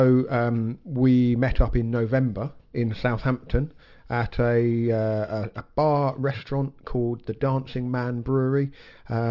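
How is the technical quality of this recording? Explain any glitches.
The recording has one fault, aliasing, which runs through the whole clip. The sample rate was dropped without a low-pass filter first, which fits a conversion from 48 kHz to 12 kHz. Anything above the new 6 kHz limit was not removed and folds back below it, landing at pitches unrelated to the original sound. The folded content sits roughly 35 dB under the main signal, yet it still gives bright, hissy parts a gritty, metallic edge, and the spectrum runs hard up to 6 kHz.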